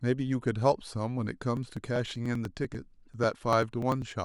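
From 1.57 s to 4.12 s, periodic USB or driver dropouts skip about two milliseconds of speech every 0.098 s. They are heard as regular ticks and show as evenly spaced vertical lines on a spectrogram.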